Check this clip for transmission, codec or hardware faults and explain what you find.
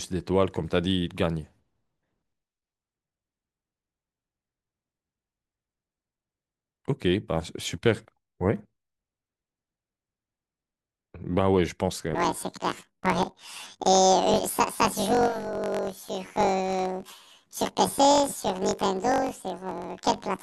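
One fault is present: from 12.15 s to the end of the clip, the speech suffers from planar audio read as interleaved. Each block of about 21 ms (which fits a 1024-sample buffer) holds the whole left channel and then the whole right channel. The player instead takes them as alternating left-right pairs, so each channel's half plays back compressed into the block at double speed. The voice jumps an octave up, 12 semitones, with a fluttering roughness at about 47 Hz. A spectrogram shows harmonics and formants doubled in frequency, striped by vertical seams every 21.33 ms. The waveform shows a matching step discontinuity at each block boundary.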